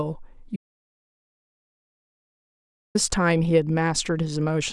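At 0.56 s the input feeding the recorder was likely cut off, through a lost connection, a failed link or an accidental mute, while the recording carried on storing silence. This audio dropout to silence lasts until 2.95 s, about 2.39 s in all. The speech breaks off abruptly and resumes just as suddenly, and between those points there is dead silence with no room tone at all. Whatever was said during that stretch is missing.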